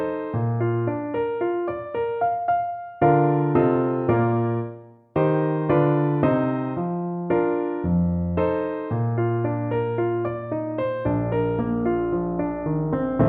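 No technical faults are audible anywhere in this recording.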